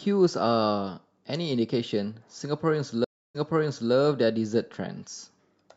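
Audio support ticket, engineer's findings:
Stream reconnect, 3.04–3.93 s. Speech cuts to 302 ms silence, then resumes 0.58 s earlier, repeating material. Waveform: flat gap, muted/ramped re-entry. Spectrogram: blank vertical band. Player/network: connection dropped, new decoder started mid-stream, server resent buffered burst.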